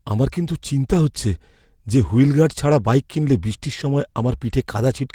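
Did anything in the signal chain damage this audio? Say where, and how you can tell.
No, nothing in this speech recording stood out on listening as a sign of damage from any stage of the signal chain.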